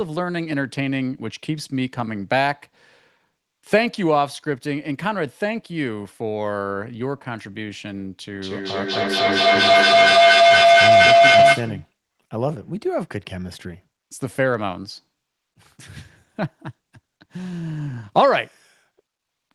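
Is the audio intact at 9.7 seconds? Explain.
No. At 9.7 seconds a ringing tone near 700 Hz swells to about 10 dB above the speech, its repeats roughly a fifth of a second apart. This feedback howl runs from 8.36 to 11.97 s: a microphone-to-loudspeaker loop gains level on each pass.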